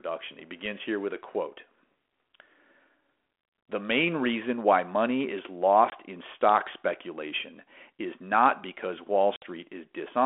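A hard-edged gap of silence cuts the speech at 5.90 to 5.93 s, between "reason why money is" and "in stock speculation is", and again for about 60 ms at 9.36 to 9.43 s after "speculation is not because". This is packet loss on an ADPCM call: the decoder's predictor and step size lose step with the sender's, so the returning speech is briefly slightly distorted before it settles.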